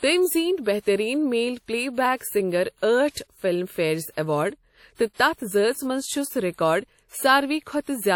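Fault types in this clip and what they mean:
WMA compression: A ringing, washy quality with hiss that swells and fades with the speech runs through the whole clip, likely from Windows Media Audio at a low bitrate near 48 kbps. A spectrogram shows blurred, smeared harmonics and nothing above 19.6 kHz.
pre-echo: Right after "زیٖنۍ بہترین میل پلے", from 2.17 to 2.21 s, a short hiss leads a sharp attack by about 40 ms, softening its onset. The waveform shows low-level noise before the transient, and a spectrogram shows a broadband smear just ahead of it.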